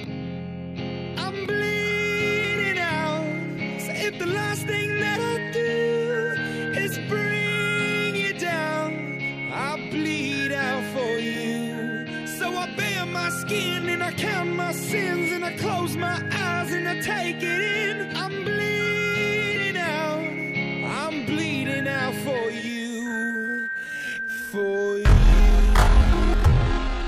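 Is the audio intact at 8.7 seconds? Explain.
Yes, the audio is intact at 8.7 seconds, with no dropout, glitch or other fault at that moment.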